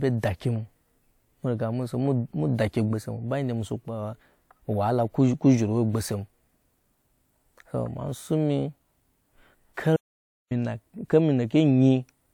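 At 9.97 s the speech cuts off into an audio dropout to silence lasting until 10.51 s, roughly 0.54 s of dead silence with no room tone. The input was likely lost briefly, through a dropped link or mute, while recording continued.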